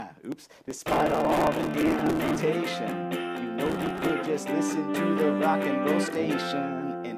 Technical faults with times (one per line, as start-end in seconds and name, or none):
0.32-2.40 processor overload crackle
3.66-4.09 processor overload crackle